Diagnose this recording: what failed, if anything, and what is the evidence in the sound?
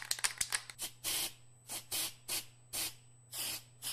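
The failure sits in the analogue wiring and power: current drawn by the USB bus in 125-microsecond microframes is leaking into the audio through a shared supply or ground. The result is a USB whine, a fixed-pitch tone at 8 kHz that runs through the entire clip, with its strongest component at the 16 kHz harmonic. It sits roughly 25 dB below the wanted sound and is heard as a thin, steady whistle.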